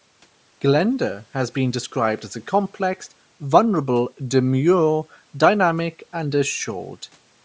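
Bluetooth LC3 compression runs through the whole speech clip. The likely cause is a low-rate LE Audio link, where the transform codec discards much of the upper spectrum in each short frame and substitutes noise fill. The damage is plainly audible as a breathy, grainy edge on the voice, which fits roughly 32 kbps with 10 ms frames. The call microphone processing leaves nothing above 8 kHz, and room noise sits about 40 dB below the speech.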